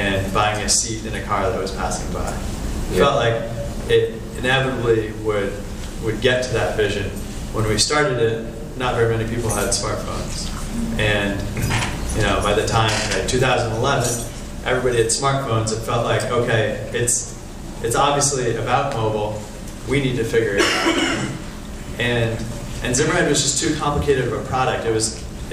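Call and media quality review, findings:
No findings in this call and media quality review.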